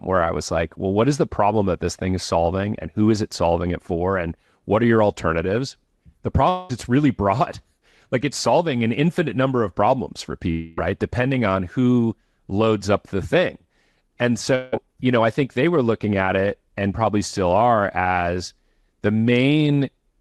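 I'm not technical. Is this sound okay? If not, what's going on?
No. At 6.49 to 6.71 s, just before "it's really broad", at 10.51 to 10.79 s, after "number of problems for", and at 14.55 to 14.74 s, before "you know I think", a fraction of a second of sound is replaced by a brief fading buzz. This is likely a long network dropout: the call briefly lost audio, and the receiver papered over the gap.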